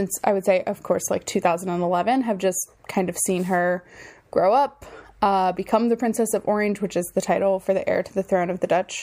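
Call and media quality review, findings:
No faults found: the signal stays continuous and stable throughout, with no audible defects to log against any component.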